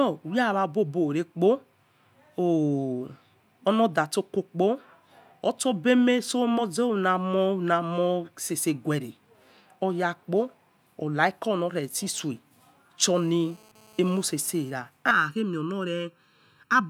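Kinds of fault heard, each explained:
GSM phone buzz: From 12.14 to 14.72 s there's that hard, raspy buzz you get when a 2G phone sits near the gear. It pulses at about 217 Hz, with a whole stack of harmonics riding on top. The audio circuitry is rectifying the handset's radio bursts. It sits about 30 dB below the speech and comes and goes rather than holding steady, which points to the phone doing a data transfer rather than a call.
Channel delay (comb filtering): From 15.11 s to the end, the speech turns hollow and phasey. One channel is arriving a fraction of a millisecond late, and when the two get folded to mono, whatever they share cancels at evenly spaced frequencies. The first notch lands somewhere around 700 Hz, with more repeating up the spectrum. That takes a bite out of the lower mids.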